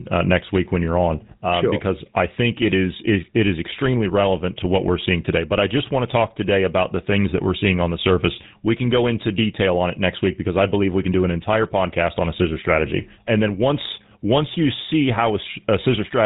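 From the start of the speech to the end, the audio carries GSM full-rate codec damage, and it is plainly audible. The codec rebuilds the voice from a vocal-tract model excited by a coarse, regularly spaced pulse train, so the sound takes on a buzzy, gravelly roughness. Nothing above 4 kHz gets through, which dulls sibilants. The degree of coarseness fits the 13 kbps rate of the original GSM coder.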